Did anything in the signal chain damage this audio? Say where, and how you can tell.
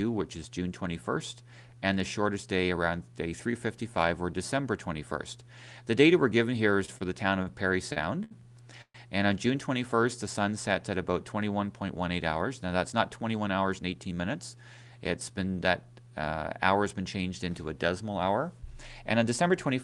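Yes, the damage happens at the network stage, in the receiver's jitter buffer. There are three short stalls from a late packet: 6.85 to 6.90 s (26 ms held), 6.98 to 7.02 s (24 ms) and 7.42 to 7.49 s (43 ms). At each one a sound hangs briefly and then resumes where it left off. No audio is missing, and that is the difference from packet loss. Loss would skip ahead, while these stalls only add delay.

Repeated stalls (stutter) follow from 7.93 to 8.96 s. There are four separate holds totalling 238 ms, the longest 128 ms, so about a quarter of that second is stretched filler. The buffer kept running dry because packets were arriving late or slower than playout. The sound drags and catches, and the longer waits fade down, but it always resumes in sequence. That separates it from a codec dropout or glitch, which would lose or garble material.

Jitter buffer speed-up runs from 12.92 to 14.13 s at 110% speed, trimming around 150 ms, and again from 19.13 to 19.83 s at 107%, trimming about 50 ms. 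The buffer had built up excess delay, and it shed it by cutting out pitch-period-sized slices. The audio sounds hurried, but its pitch stays put. A wrong sample-rate playback would raise the pitch along with the speed.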